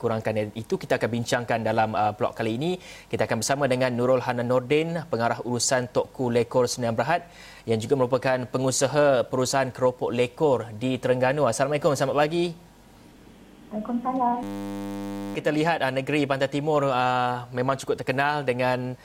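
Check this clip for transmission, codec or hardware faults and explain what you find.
There's one fault: a system hang loop from 14.43 to 15.35 s. The playback side froze while the hardware kept cycling a 10 ms buffer, so that tiny slice repeats at 100 Hz as a steady buzz, and about a second of audio never arrives.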